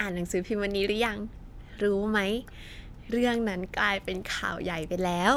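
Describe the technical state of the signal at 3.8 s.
At 3.8 s the speech signal is intact, with no technical fault audible at that moment.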